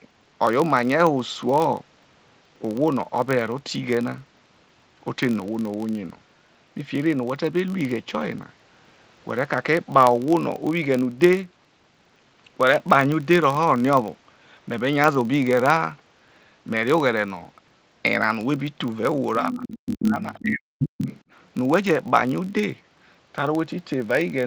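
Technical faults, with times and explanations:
Throughout: filter restarted on every block. A steady buzz near 46.9 Hz rides under the speech and rises and falls with its level, because a filter starts each block from silence and leaves a small transient at every block boundary, which fits a 1024-sample block.
19.48 to 20.25 s and 20.42 to 20.87 s: speech suppressed in double talk. The speech dips sharply, by roughly 40 dB at its deepest, and drops out in pieces for about 700 ms and then about 500 ms. This is likely an echo canceller turning down the talker along with the far-end echo while both sides spoke.
19.55 to 19.79 s, 20.02 to 20.11 s, 20.38 to 20.42 s and 20.8 to 21.21 s: other side's voice leaking through. Brief scraps of a second voice come through. They range from well below the main speech to about as loud as it, with the one at 20.02 s the loudest. The likely cause is the loudspeaker's sound reaching the microphone and not being fully removed by the echo canceller.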